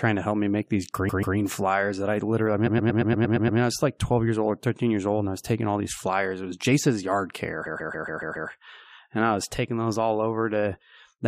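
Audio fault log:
1.08–1.36 s, 2.66–3.59 s, 7.65–8.49 s, repeated frames: a compressed block replays back to back (139 ms twice, 116 ms eight times, 139 ms six times), so the speech stutters and runs 2.04 s longer.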